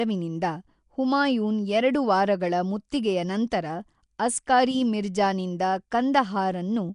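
Throughout the speech there is a plainly audible rough, hissy halo and a smeared, underwater quality, likely from Nellymoser compression, Flash's old microphone codec, which fits about 44 kbps. Starved bands are refilled with noise: a spectrogram shows grainy blocks and nothing above 10.6 kHz.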